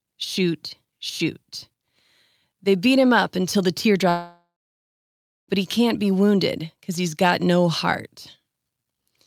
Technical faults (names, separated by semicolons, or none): long network dropout